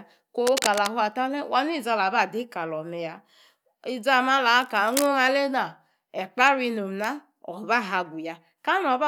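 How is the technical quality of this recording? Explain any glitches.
Two short bursts of scratching noise interrupt the speech. Cable scratch noise appears from 0.47 to 0.88 s, about 5 dB below the speech, and again from 4.62 to 5.06 s, about 10 dB below. The likely cause is a worn cable or connector being moved, its contact resistance jumping and adding dense, irregular crackle and rustle over the speech.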